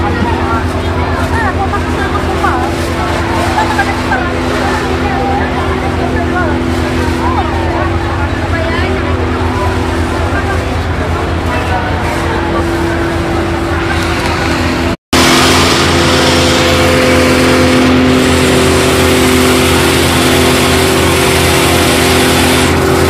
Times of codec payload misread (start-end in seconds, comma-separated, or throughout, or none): none